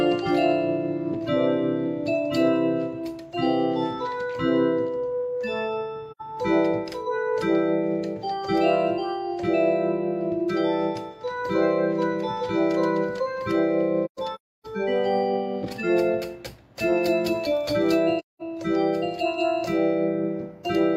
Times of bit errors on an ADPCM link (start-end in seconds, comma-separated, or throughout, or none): none